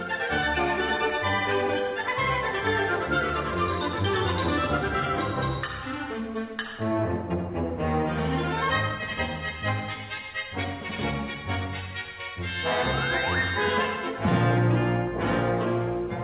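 No technical faults can be heard anywhere in this audio.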